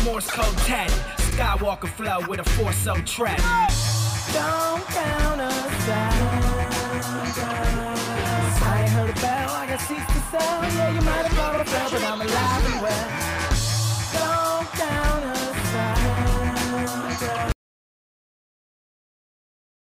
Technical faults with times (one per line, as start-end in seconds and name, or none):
1.29-1.35 repeated frames
11.56-11.61 repeated frames
17.52-19.92 audio dropout to silence